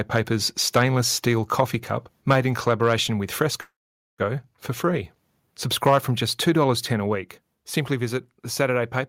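Microphone overload appears at 0.76–0.83 s, around 1.6 s, and at 2.30–2.36 s just before "in collaboration with". The peaks flatten and take on a harsh crackle, pushing about 4 to 5 dB past the converter's limit. Input gain set too high for the converter is the likely cause, with a few percent of samples squared off in each burst.

At 2.33 s, inside that last distorted peak, the level drops suddenly by about 2 dB. This is a microphone volume stepped down event, likely the call software cutting input gain after detecting clipping. Two more steps follow, about 4 dB at 7.15 s and about 3 dB at 9.01 s, each an abrupt fall in voice and background together.

After "in collaboration with", a call audio freeze runs from 3.61 to 4.21 s. About 0.57 s of filler is inserted, and roughly 0.47 s of it is near-silent before speech resumes where it stopped. Nothing is lost, but the timing shifts. The likely cause is delayed packets draining the jitter buffer.

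A final microphone overload at 5.86–5.98 s clips about 3 dB over the converter's limit with the same crackling edge, likely from excessive input gain.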